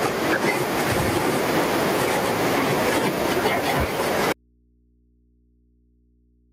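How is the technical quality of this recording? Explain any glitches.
The recording has two clear problems: the level breathes throughout, and the speech cuts out for good at 4.33 s.

Gain pumping runs through the whole clip. The level swings by around 10 dB. This likely comes from input gain set far too high, with a fast limiter clamping down on each peak and then releasing. Loud and soft passages end up squashed together. The room noise itself sits about 45 dB below the speech.

An audio dropout to a faint residue begins at 4.33 s and lasts to the end. The speech stops abruptly and only a low mains hum remains, roughly 40 dB below the earlier signal. The likely cause is the wanted signal being lost while the path after the break stayed live and picked up hum from the open input. A natural pause or fade would taper off, and the room tone would carry on through it. Here the change is instant, and the room tone is replaced by hum.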